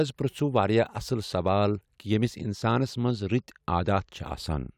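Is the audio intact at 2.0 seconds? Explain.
Yes, the speech at 2.0 seconds plays through intact, with no dropout, glitch or other fault at that moment.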